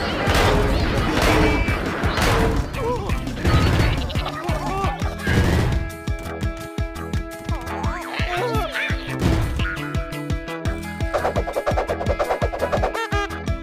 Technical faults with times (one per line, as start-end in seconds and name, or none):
4.29 dropped buffer (overrun)
9.35 dropped buffer (overrun)